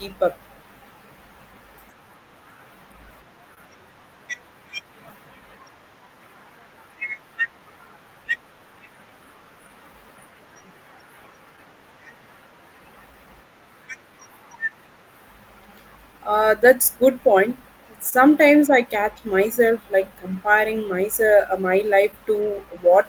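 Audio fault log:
Throughout, clock drift between sender and receiver: the sending end's clock runs roughly 2 percent slow against the receiving end, so the jitter buffer keeps draining rather than holding steady. The receiver has to keep stretching things out to stay in step, and that mismatch is what sits underneath the small timing wobbles you hear across the whole speech clip. It's a slow, one-directional pressure, not a single event, so it never really lets up.
0.14 to 22.66 s, repeated timing corrections: all through this stretch the receiver keeps padding out short bits of sound to cover for the slow sender, running things at about 98 percent speed and adding up to something like 400 ms over the span. The edits all push the same way but land at uneven spacing, so instead of one clear glitch you get faint hiccups and a slightly unsteady, dragging pace.
3.54 to 3.59 s and 18.09 to 18.14 s, short stall from a late packet: twice a packet just didn't turn up on time and the buffer ran dry, so the receiver held the last sound for about 25 ms, then about 26 ms, until it arrived and carried on from the same spot. 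Nothing actually goes missing; you just get a sound hanging on a touch too long, with a slight buzz or dip.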